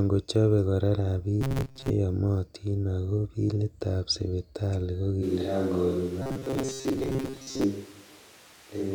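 Just after "kochobe kora", from 1.41 to 1.90 s, the speech turns into a rigid metallic buzz fixed at 134 Hz. This is robotic sound from repeated short buffers, likely caused by a player looping roughly 7.5 ms chunks while most of the real audio is skipped.

After "ago bilitab sipital ko", at 5.24 s, the sound abruptly becomes hollow, roomy and thinner in the bass. Background noise sits about 25 dB below the speech, while the overall level barely changes. This is a switch to a distant microphone, likely after the close microphone dropped out. It differs from added reverb by its sudden onset and lost low end, and it lasts to the end.

The same 134 Hz robotic buzz returns from 6.22 to 7.64 s.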